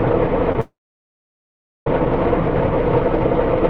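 A short stall from a late packet occurs at 0.52 to 0.56 s. A packet was late, so the receiver's jitter buffer ran dry and the last bit of sound was stretched for about 23 ms until the packet arrived. Playback then resumed from the same point, so nothing is lost. The sound is held a little too long, with a faint buzz or dip, and everything after it plays about 23 ms later than before.

A call audio freeze follows at 0.61 to 1.87 s, lasting about 1.26 s. The sound carries on briefly as a fading buzz or hiss and then drops to silence for roughly 1.1 s before the audio picks up again where it stopped, with nothing missing. The likely cause is packets held up in transit, draining the jitter buffer so the receiver had to fill the wait. The gap adds about 1.26 s of extra delay to everything after it.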